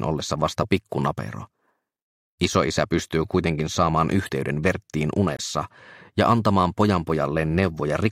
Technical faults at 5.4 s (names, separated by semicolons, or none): Bluetooth dropout